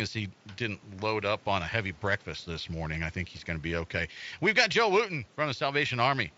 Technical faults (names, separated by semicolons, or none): none